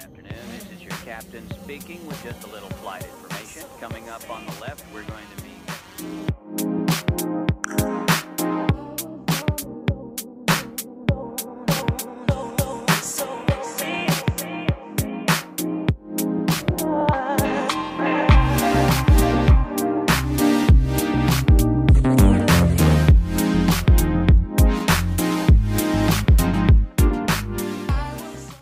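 Nothing stood out on listening to this audio.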